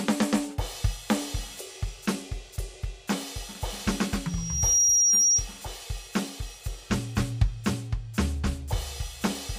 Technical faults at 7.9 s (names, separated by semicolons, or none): none